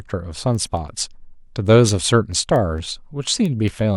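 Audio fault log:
0.1–3.90 s word clock ticks: sharp ticks recur about five times a second through the speech. The receiver's clock is unlocked and drifts, slipping one sample at each tick.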